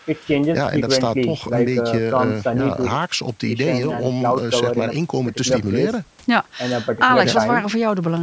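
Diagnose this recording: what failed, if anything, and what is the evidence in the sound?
Nothing stood out on listening to this speech recording; the only processing heard is the usual call microphone chain, with no content above 8 kHz and the lowest bass removed as expected.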